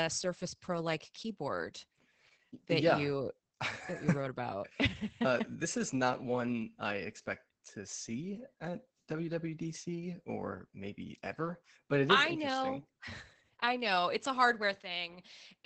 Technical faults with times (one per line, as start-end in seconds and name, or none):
0.00-15.65 Opus voice compression